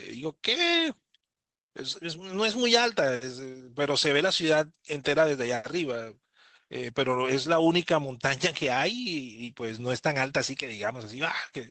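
Speech carried over a WebRTC call path with the Opus codec, its top end rolling off around 8 kHz, and no technical faults to report.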